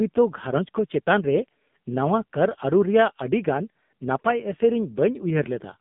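Throughout, the speech carries an AMR narrowband mobile codec sound, band-limited to roughly 150 Hz–3.6 kHz. The heavy buzzy, synthetic coding fits a low mode near 6.7 kbps. A spectrogram shows a hard ceiling, with nothing above 3.7 kHz, and smeared harmonics.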